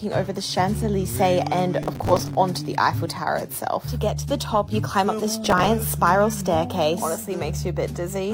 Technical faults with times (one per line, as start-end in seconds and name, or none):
1.82-2.35 processor overload crackle
5.44-5.66 processor overload crackle